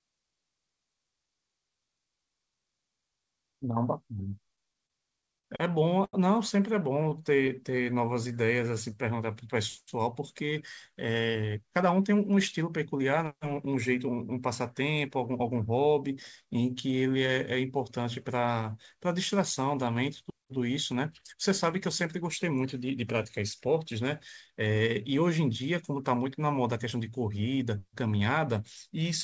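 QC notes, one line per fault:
4.56–5.46 s, repeated stalls (stutter): the sound catches and drags six times in under a second, with about 119 ms of held-over audio in total and the longest hold 50 ms, roughly 13% of the stretch. Packets were arriving behind the playout clock, so the jitter buffer kept draining and the receiver extended the last sound each time until fresh data came in. Nothing is lost, but the flow stutters instead of running smoothly.
6.05–6.15 s, short stall from a late packet: one sound is held for about 80 ms longer than it should be, with a slight buzz or dip to it. A single packet missed its playout slot, the buffer emptied, and the receiver stretched what it already had until the packet turned up, then resumed from the same point. That wait also pushed the playout delay out by about 80 ms.
7.10–7.74 s, scattered short gaps: about four tiny hiccups, the longest around 15 ms and together covering about 5% of this stretch. 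Isolated packets went missing or arrived late, and each hole was patched by continuing the preceding sound. Nothing is audibly absent, but the patches show up as brief ticks and slight smears instead of clean transitions.
7.34–9.02 s, jitter buffer slow-down: the sound runs at about 91% speed with unchanged pitch, drawn out by about 165 ms overall. The buffer was short of reserve, so the receiver rebuilt it by repeating single pitch periods and bits of pauses many times over. This overlaps the end of the scattered gaps, consistent with the buffer having just been drained.
10.92–13.32 s, jitter buffer speed-up: the sound plays at about 109% speed at the same pitch and comes across as hurried, with roughly a fifth of a second taken out in total. The buffer had built up more audio than its target, as happens once held-back packets arrive together, so the receiver trimmed short pieces of one or a few pitch periods repeatedly to bring the delay back down.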